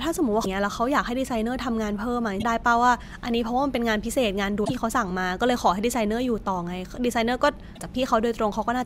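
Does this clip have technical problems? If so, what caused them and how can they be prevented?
Yes. Damaged data in a compressed stream produces short glitches at 0.41–0.46, 2.39–2.43, 4.61–4.71 and 7.72–7.80 s. Corrupted bytes make the decoder misread frames and resync, leaving broadband vertical smears on a spectrogram and abrupt waveform breaks. Verify files and streams with checksums and reliable transport.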